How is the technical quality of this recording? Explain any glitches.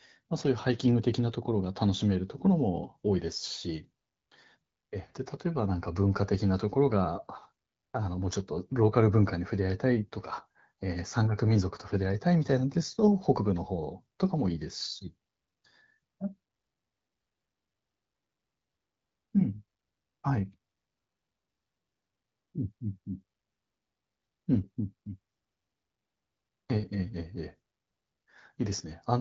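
No glitches can be heard in this speech recording.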